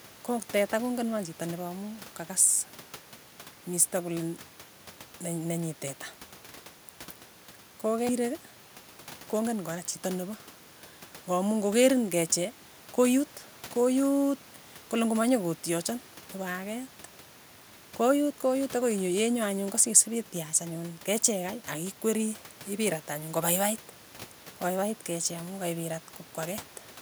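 No technical faults can be heard anywhere in the speech.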